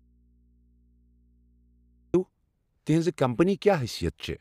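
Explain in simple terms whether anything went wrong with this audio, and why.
Something most likely broke the signal path for a while, though the line after the break stayed live. The result is an audio dropout to a faint residue: from the very start until 2.14 s, the speech is missing, leaving only a low mains hum far quieter than the voice, before the sound abruptly returns.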